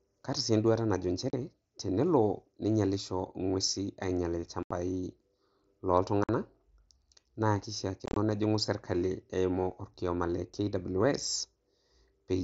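Unconcealed Bluetooth headset packet loss at 1.30 s (just after "kaata si enduata najo"), 4.63 s, 6.24 s and 8.06 s. Dropped headset packets become silent holes of 30 to 75 ms, and the last is a chopped cluster over about 105 ms. Each has abrupt edges.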